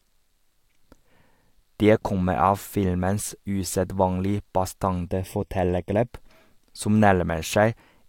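From 5.07 to 6.08 s there's channel delay (comb filtering): one side lags roughly 0.4 ms, so the mono sum notches out near 1.5 kHz and sounds hollow.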